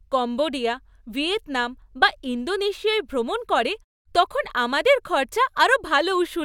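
No faults detected in this speech recording; the background falls silent in the gaps between phrases and comes back ahead of each one, with only very quiet sound lost.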